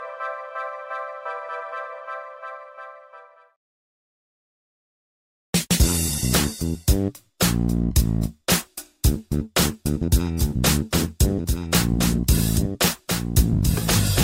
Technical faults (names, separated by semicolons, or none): doubled audio track